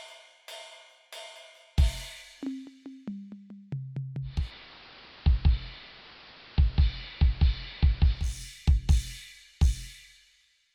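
Music, where the digital radio blends to analogue: at 4.22 s the receiver loses its digital stream and cross-fades over 310 ms to the AM broadcast, returning at 8.44 s. Meanwhile hiss sits roughly 20 dB down, at unchanged level.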